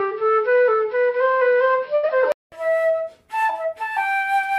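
Input switched to a poorer device, from the start to 2.52 s: the band stops at 5.5 kHz, so these everyday sounds are dull and boxy. Likely the recording was coming through a lesser microphone or headset profile. A 200 ms silence, a level shift of roughly 5 dB and a change in background noise mark the return to the fuller input.

Burst of packet loss, 1.95 to 2.05 s: the receiver covered a 76 ms gap by continuing the last sound and fading it, heard as a held buzz or fading hiss. The audio then resumes with 80 ms missing.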